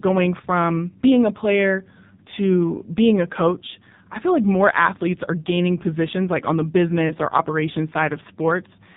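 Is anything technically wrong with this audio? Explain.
Yes, there are two faults. Throughout, the speech has passed through the AMR narrowband mobile codec, which samples at 8 kHz and rebuilds the voice from a vocal tract model driven by sparse pulses in each 5 ms subframe. Nothing above 4 kHz survives, and the codec damage is heavy. The voice sounds buzzy and synthetic, which points to one of AMR-NB's lowest modes, around 5.9 kbps.

From 7.08 to 7.17 s, just after "positions like on the" and before "or operations", there are lost AMR speech frames. One frame's data failed its check, so the decoder filled the gap by reusing the previous pitch and vocal tract settings at reduced gain. The loss sounds like a single 20 ms frame, heard as a brief dip or warble, and the voice comes back weak or rough for a moment.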